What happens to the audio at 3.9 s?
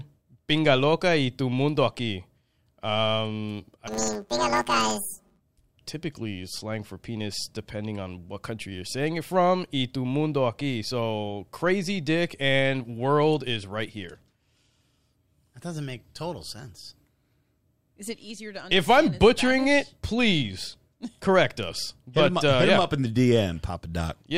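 At 3.88 s the stereo samples start being misread: planar audio read as interleaved. The stream stores each 10 ms block as all left-channel samples followed by all right-channel samples, but the player treats it as alternating left-right pairs. Each block therefore plays back twice at double speed, left half then right half. With blocks this short, the speech takes on a robotic buzz at 100 Hz rather than an obvious octave jump, lasting until 5.41 s.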